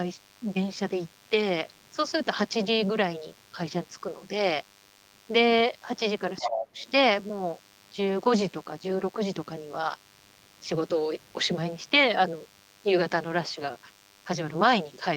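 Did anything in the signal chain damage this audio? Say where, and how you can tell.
Yes. A DECT cordless phone buzz runs through the whole recording, entering in the analogue wiring: a thin, steady 100 Hz buzz sitting roughly 30 dB below the speech. A nearby DECT radio bursting every 10 ms is being rectified by the audio circuit. A spectrogram shows unbroken horizontal lines at 100 Hz and its many harmonics.

From 6.37 to 6.91 s, a second voice is audible only a few dB below the main talker. This is the other side's voice leaking through, likely because the echo canceller in call processing failed to remove loudspeaker sound from the microphone. The spectrogram shows overlapping harmonic patterns.

Inside that window, from 6.47 to 6.76 s, the talker's own speech is pushed down by roughly 30 dB at its deepest, over about 300 ms. This is speech suppressed in double talk, likely the echo canceller ducking everything while both sides spoke. 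The waveform shows a sudden notch in the envelope.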